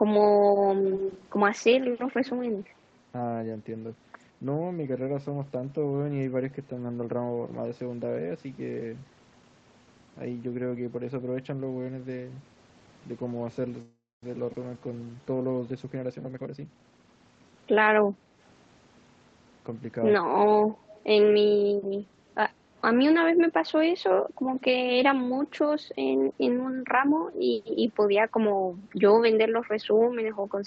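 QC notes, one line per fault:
0.84–1.27 s, 2.25–2.30 s and 20.94–21.04 s, echo leak: a delayed copy of the speech trails the original by 158 ms, at about -10 dB relative to the speech in the first stretch, about -20 dB in the second and about -30 dB in the third. The fixed delay of the copy points to a far-end loudspeaker whose echo canceller likely failed to remove all of what its microphone picked up, so the residue was sent back into the call.
13.81–14.23 s, call audio freeze: the last sound is held and extended as a fading fill, then drops to silence for about 240 ms before the speech resumes exactly where it stopped. In total 411 ms of fill is inserted and nothing is lost, so the playout delay increases by that amount. This matches packets likely held up in transit, which emptied the jitter buffer until the delayed audio arrived.
14.53 s, skip ahead: playback jumps forward with almost no gap, and only about 7 ms of fill joins the two sides. 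Roughly 150 ms of speech is gone, enough to clip part of a syllable or more. A stretch of audio was dropped, on the way or by the buffer as it overflowed, while later audio was already waiting, shedding about 150 ms of delay in one step.
14.74–15.60 s, jitter buffer slow-down: the speech runs at 86% speed while the pitch stays unchanged, so sounds are drawn out. The receiver repeated single pitch periods and fragments of pauses many times in a row, adding 129 ms in total. This built up its reserve while the buffer was running low or had just raised its target delay.
15.84–17.89 s, jitter buffer speed-up: the speech plays at 120% speed at the same pitch and sounds hurried. The receiver repeatedly cut short pieces of one or a few pitch periods, removing about 0.4 s over the span. This brought the buffered audio back down to its target delay after it had overfilled.
18.15–18.34 s, background gated by the echo canceller: the room sound dips briefly, by about 6 dB at its deepest, over roughly 200 ms, and then recovers. 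The echo canceller pulled the microphone level down while the loudspeaker was active and released it once it judged the echo risk had passed, which produces this short hole in the ambience.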